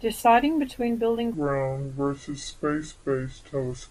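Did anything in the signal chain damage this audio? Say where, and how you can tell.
Yes. From 1.34 s, right after "between building", to the end, this section at the wrong speed plays at 0.705 times normal, dropping pitch roughly seven semitones. On a spectrogram, harmonics and formants shift downward abruptly; the waveform stretches out. The likely cause is a playback or resampling clock mismatch.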